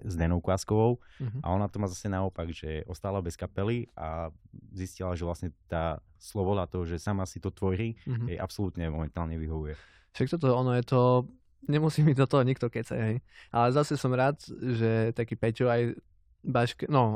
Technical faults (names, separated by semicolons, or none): none